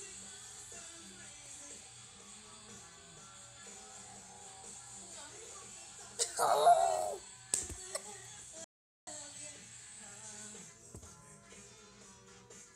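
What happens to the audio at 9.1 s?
The input was likely lost briefly while the recorder kept writing silence, causing an audio dropout to silence from 8.64 to 9.07 s. For those 0.43 s the sound cuts to dead silence with no room tone, then resumes mid-flow just before 9.1 s.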